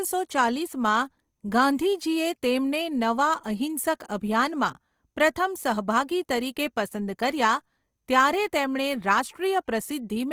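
Opus compression runs through the whole clip, from start to end. The speech keeps its full bandwidth, but detail in each band has been thinned out and patched with folded or noise-filled content, so voiced tones come across rough, noisy and grainy rather than swirling. That pattern points to the encoder's music (CELT) mode starved of bits, likely at a low rate around 24 kbps, and the damage is plainly audible.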